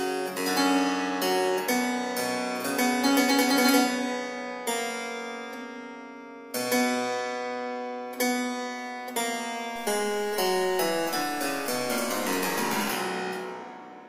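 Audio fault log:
9.76–12.90 s, low bit depth without dither: the audio was likely truncated to a very coarse resolution, which fits about 6 bits, with no dither. The rounding error tracks the signal, so a grainy, gritty distortion about 20 dB below the level shifts with the sound.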